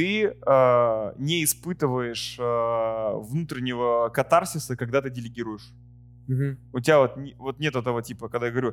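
A ground loop or a nearby transformer has coupled the power line into the signal path, and the resulting mains hum runs through the whole speech recording from start to finish. It sits at 60 Hz, a steady low drone with a few low harmonics above it, roughly 25 dB below the speech. Because it never changes, it continues through every pause, and under the talking it thickens the low end.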